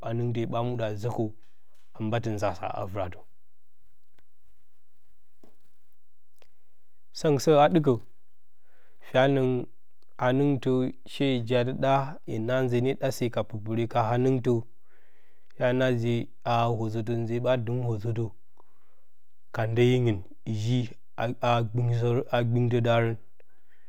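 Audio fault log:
throughout, DC offset: nothing audible marks it in this speech, but the waveform sits off centre at about -37 dBFS and the spectrum shows steady energy at 0 Hz. A constant bias shifted every sample away from zero, using up some headroom.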